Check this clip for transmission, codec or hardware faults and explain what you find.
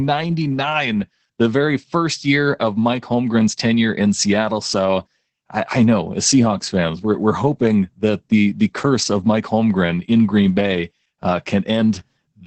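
One codec fault runs through the whole clip: Opus voice compression. The speech has nothing above about 8.6 kHz, so sibilants and breath lack their top end. The coder models speech with linear prediction and spends few bits on the excitation signal. That coarse excitation is plainly audible. The voice sounds muffled and hoarse, with a slightly robotic edge. This points to Opus in SILK mode at a low rate, around 12 kbps.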